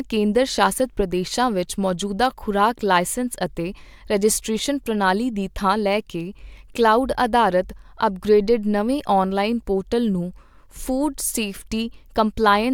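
No technical faults are audible anywhere in this speech recording.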